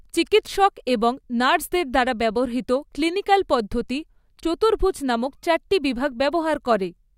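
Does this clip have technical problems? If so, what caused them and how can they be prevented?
No, there are no technical problems to report in this clip. Nothing needs to be caused or prevented here.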